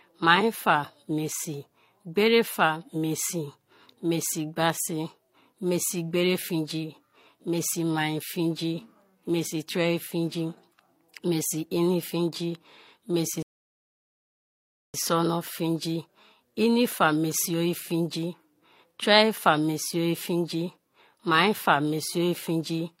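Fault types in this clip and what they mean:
Rebuffering stall: after "mesi ini fingi mesi" the speech drops to silence at 13.42 s, then resumes intact with "sona tengi inifa mesi" at 14.94 s, as the player waited about 1.5 s for more data.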